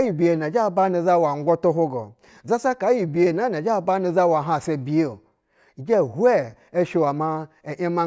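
No technical faults can be heard anywhere in this speech recording.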